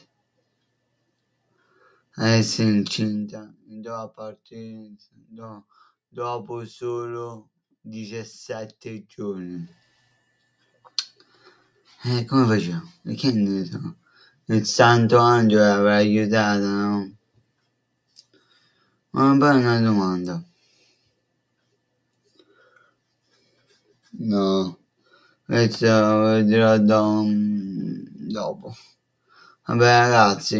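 Sound cut by the noise suppressor, at 1.51–2.17, 3.54–6.16, 10.74–11.94, 13.95–14.49, 17.12–18.95, 20.45–21.08, 22.35–25.49 and 28.08–29.67 s. The suppressor mistook steady or decaying parts of the sound for noise and pulled them down by about 14 to 19 dB. Within each span, short stretches totalling about 0.15 to 1 second sink in level or lose their tails abruptly.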